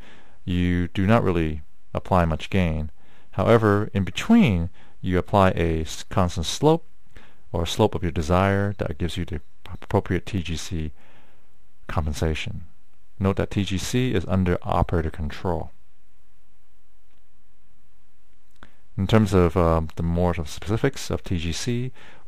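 Throughout, crude rate conversion adds an inharmonic fizz, roughly 30 dB down, that tracks loud, bright sounds, unlike hiss. It fits samples dropped converting 48 kHz to 44.1 kHz.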